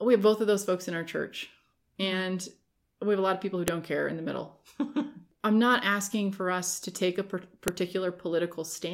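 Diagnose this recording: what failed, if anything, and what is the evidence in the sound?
A file header played as audio, a storage and streaming fault where WAV pieces were joined without their headers stripped. The speech has two sharp, loud clicks, at 3.68 s, between "lot of people who" and "care in the middle", and at 7.68 s, just after "us to take a". They are 4.0 s apart, which points to fixed-length chunks. At each join, the few dozen header bytes were decoded as samples, producing a snap unrelated to the speech.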